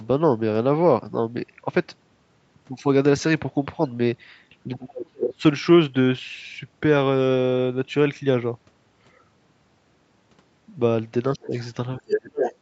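From 4.67 to 5.42 s the speech sinks deep, by roughly 35 dB, for most of that stretch and nearly vanishes. This is speech suppressed in double talk, likely an echo canceller that heard both sides at once and turned the talker down along with the echo. The same dip returns more briefly, from 11.36 to 11.54 s at about 20 dB down, and again from 11.98 to 12.38 s at about 30 dB down.

Overlapping those late dips, the other side's voice leaks through, likely because the canceller did not strip all of the loudspeaker sound from the microphone. From 11.42 to 11.68 s it is a faint scrap, well below the talker. From 12.1 to 12.19 s it briefly matches the talker's level. From 12.35 to 12.55 s it sits only slightly below. Each leak is short, a second voice intruding in bursts within the call's band, which holds nothing above 8 kHz.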